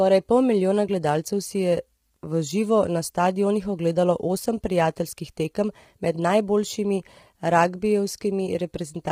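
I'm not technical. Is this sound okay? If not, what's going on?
No. Throughout, the speech sounds rough and grainy, with a hiss between tones and an artificial-sounding top end, likely from heavy low-delay AAC compression, as used in video calls.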